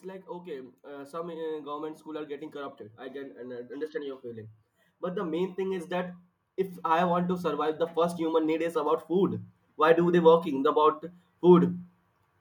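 Automatic gain rising from 0.05 to 6.19 s (about 12 dB) and 6.83 to 11.75 s (about 9 dB): background swells along with the speech, unlike pumping, which ducks on loud syllables and swells back between them.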